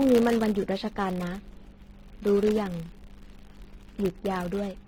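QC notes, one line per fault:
throughout: filter restarted on every block. A 100 Hz buzz rides under the speech. Each block restarts from silence with a small tick that tracks the level.
throughout: generation loss. Swirly, hollow, smeared speech with blurred attacks and nothing above 16.6 kHz. This is likely about five passes through a codec like AAC-LC near 64 kbit/s.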